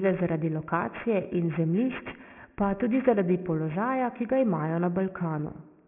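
Throughout, the speech was resampled without an anti-alias filter, consistent with a 6 kHz rate. Energy above 3 kHz folds back as gritty, metallic aliasing roughly 20 dB down.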